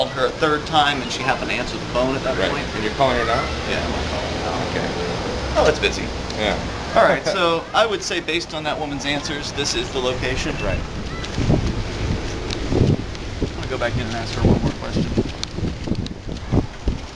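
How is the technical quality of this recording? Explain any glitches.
No technical faults or glitches can be heard anywhere here.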